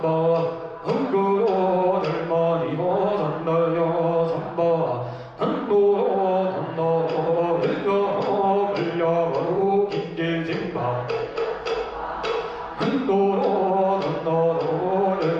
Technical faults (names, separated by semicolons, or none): none